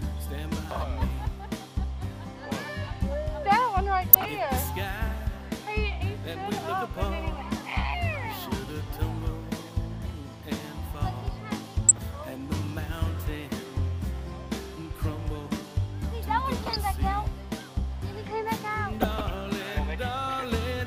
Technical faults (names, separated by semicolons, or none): DAB burbling